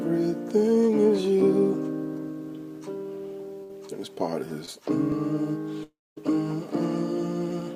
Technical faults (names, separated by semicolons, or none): burst of packet loss; short concealed packet loss; long network dropout